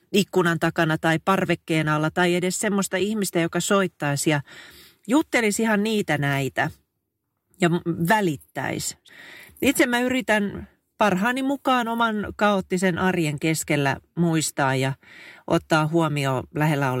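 Nothing in the speech stood out as a technical problem on listening.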